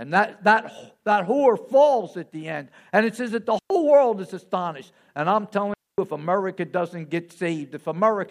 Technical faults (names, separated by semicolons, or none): digital wireless dropout